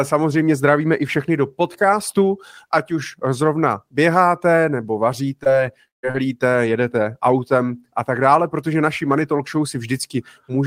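At 5.43 s and again at 6.11 s, short concealed packet loss fills about 20 ms and 40 ms of missing audio by extending the preceding sound, heard as brief smears. Between 5.88 and 6.05 s the sound drops out for about 150 ms of near-silence, a gap likely caused by a long network dropout, before the audio resumes.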